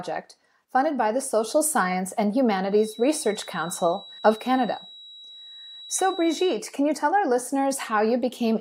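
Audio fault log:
2.66–6.62 s, feedback whistle: a thin, steady tone near 3.9 kHz sits behind the speech, around 20 dB below it, swelling and fading slowly in level before clearing just ahead of "can you tell our". The likely cause is a loudspeaker-to-microphone loop held right at the edge of feedback, sustaining one frequency without building. On a spectrogram it appears as a single bright horizontal line at 3.9 kHz; the waveform barely changes.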